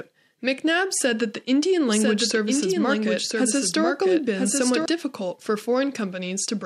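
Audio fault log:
1.88–4.86 s, doubled audio track: a second copy of the signal is mixed into the output, most likely because a slower capture path or an edit holds two versions out of step. The copy trails the original by about a second and sits roughly 5 dB lower. It is full-band, with no decay or room colour, so it sounds like a second, quieter playback rather than an echo. It starts and stops abruptly and begins just before "difficult for".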